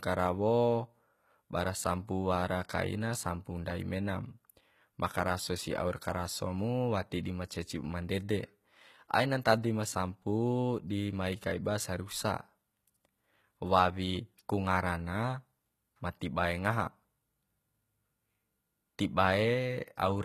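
From start to finish the speech has a bright but synthetic-sounding top end, with s sounds coming out gritty and lispy, and nothing above 19.5 kHz. That's likely HE-AAC compression at a low bitrate, around 20 kbps, rebuilding the treble from copied lower bands.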